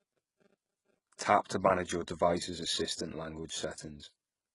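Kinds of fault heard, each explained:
HE-AAC compression: The speech carries a bright but synthetic treble, with sibilants sounding gritty and lisping, and nothing above about 11.1 kHz. This is likely spectral band replication, where upper bands are patched in from copied lower ones rather than coded. The heavy damage fits a very low bitrate around 12 kbps. Unlike a plain low-pass or ordinary AAC dulling, the top end remains present but metallic, its harmonics misaligned with those below.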